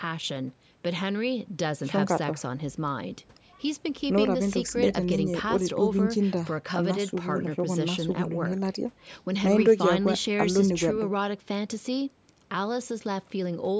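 No technical faults can be heard in this speech clip: it carries the usual traits of a call's microphone processing, with the lowest bass filtered out and nothing above 8 kHz, both of which are normal for that path.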